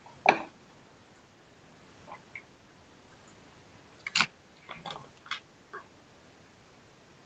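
Nothing goes wrong in this speech; it simply comes across the way audio over a call connection normally does, with the lowest bass trimmed and nothing above about 8 kHz.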